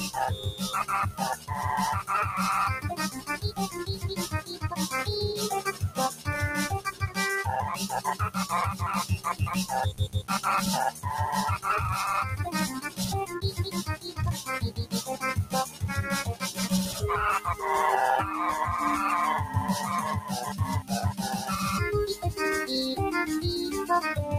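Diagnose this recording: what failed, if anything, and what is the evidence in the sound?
The failure is in call processing. A speech noise suppressor was applied to music or sounds. Throughout, the level swings by around 10 dB and the sound pumps, flutters or thins out. The suppressor treats steady, sustained content as noise and keeps pulling it down.

Sound cut by the noise suppressor appears at 0.36–1.51 s, 3.12–4.67 s, 5.67–6.28 s, 6.86–7.17 s, 8.73–9.26 s, 10.15–10.3 s, 12.85–17.01 s and 20.21–21.49 s. Drops reach about 11 to 14 dB, deepest near 13–17 s. Sustained parts and decays sink while onsets pass.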